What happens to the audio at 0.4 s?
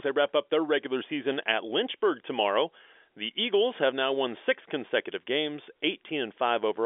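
Nothing goes wrong at 0.4 s: the speech there comes through intact, carried in the narrow telephone band of G.711 coding with nothing heard above about 3.7 kHz.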